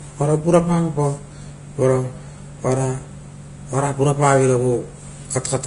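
Throughout the speech, nothing is heard above 10.5 kHz, and the remaining treble turns hissy and grainy, likely from Vorbis compression at a low bitrate near 31 kbps. Unlike a simple low-pass filter, which only dulls the sound, this adds noisy, roughened texture.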